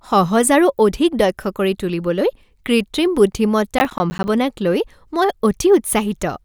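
Processor overload crackle runs from 3.79 to 4.28 s. For about half a second the processing couldn't keep up and kept missing its deadlines. Buffers in the region of 10 ms weren't delivered in time, and each missing one was filled with silence. Around fifteen of these tiny hard-edged dropouts land close together, so the speech through that stretch is broken up by a burst of gritty, tearing crackle that stops once the load clears.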